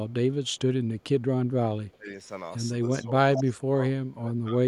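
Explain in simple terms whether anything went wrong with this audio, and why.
Something did go wrong, in two related ways.

There is an echo leak: a delayed copy of the speech, arriving about 0.22 s late, slips back into the recording at 0.09–0.13 s, 0.45–0.59 s and 1.92–1.96 s, very faintly each time. At 3.35–3.52 s it comes through almost as loud as the speech itself. The likely cause is a loudspeaker on one end whose sound reached the microphone and was not fully cleaned out. The tell is that something is added: a late repeat of the audio.

There is also speech suppressed in double talk, at 1.96–2.09 s, 2.99–3.82 s and 4.15–4.57 s. Here the speech itself dips or partly drops out, most deeply in the last stretch. It likely happened because both ends were talking at once, and the echo-cancelling system turned its own talker down along with the echo to be safe. Unlike the echo leak, nothing extra is heard; sound is taken away instead.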